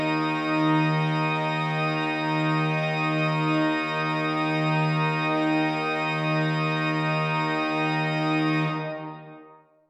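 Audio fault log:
No faults can be heard in this recording of sounds. There is nothing here that needs a time or a note in the log.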